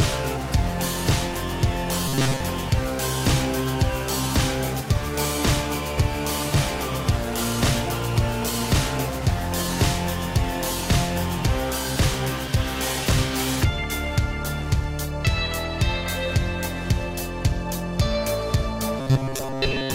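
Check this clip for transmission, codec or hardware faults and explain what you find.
Two bursts of robotic sound from repeated short buffers occur, from 2.08 to 2.40 s and from 18.99 to 19.94 s. Both carry a rigid metallic buzz near 134 Hz. Late-arriving audio was likely padded by looping a chunk of about 7.5 ms, with most of the real sound skipped.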